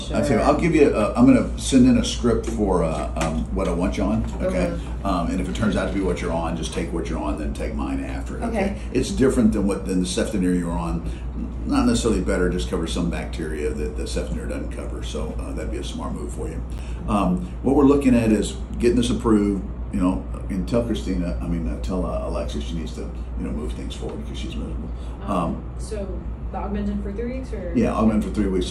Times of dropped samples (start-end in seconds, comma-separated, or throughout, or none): 1.57, 6.55